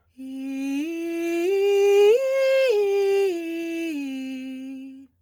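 From start to finish the music has a grainy, breathy top end, likely heavy Bluetooth LC3 compression, which fits a low bitrate around 32 kbps.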